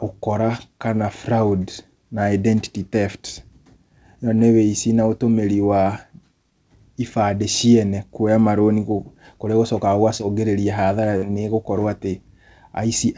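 At 10.18 to 10.21 s there is a short concealed packet loss, about 33 ms long. Part of the speech stream did not reach the decoder in time, and the receiver covered the hole by extending the preceding sound for roughly 13 ms before blending back in, so about 20 ms of real audio is missing. It is heard as a brief smear or wobble in the speech, and a short consonant there can drop out.

At 11.17 to 11.27 s a burst of packet loss takes out a longer stretch, about 94 ms. Concealment carries the last sound forward for about 49 ms, fading it as it goes, so a voiced sound turns into a held buzz and an unvoiced one into a dying hiss. About 40 ms of speech is lost outright, and a further 10 ms is cut when playback resumes further on. Throughout the clip nothing reaches above 8 kHz, which fits a wideband call codec such as G.722.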